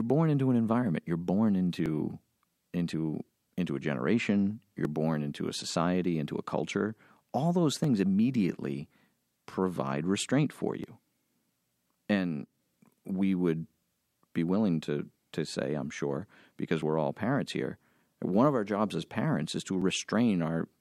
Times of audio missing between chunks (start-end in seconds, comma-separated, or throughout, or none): 1.86, 4.85, 7.84, 10.84, 19.82